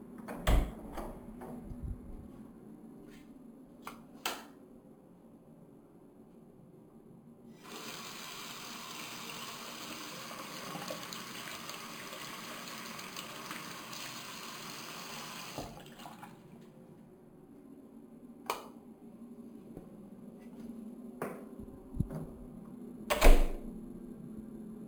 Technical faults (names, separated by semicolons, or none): imaging from sample-and-hold upsampling